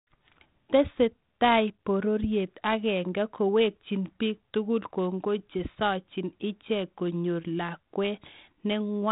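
No technical faults are audible.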